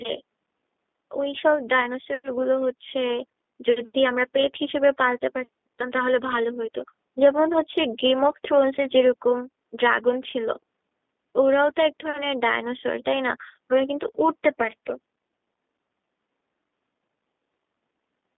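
From start to finish the speech has been through a G.729 codec, and the damage is plainly audible. Everything sits in a narrow telephone band of roughly 200 Hz to 3.6 kHz. The call microphone's own high-pass is buried under that tighter limit. The codec rebuilds each short frame from a vocal tract filter, a pitch predictor and a few pulses, so the speech comes out rough and slightly synthetic. That fits an 8 kbit/s G.729A stream.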